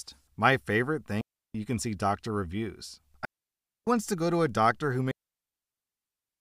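A digital wireless link repeatedly loses too much data and its receiver mutes, so this speech clip has digital wireless dropouts: clean near-silent holes at 1.21–1.55 s, 3.25–3.87 s and from 5.11 s to the end, lasting about 0.34, 0.62 and 1.3 s, with no noise bursts around them.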